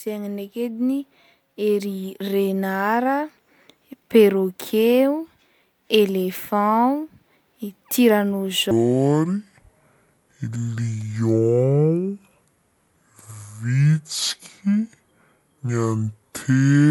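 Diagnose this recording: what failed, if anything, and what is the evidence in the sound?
From 8.71 s onward, speech turns slow and deep, about ten semitones down: a section at the wrong speed, 0.578x, likely a playback clock mismatch.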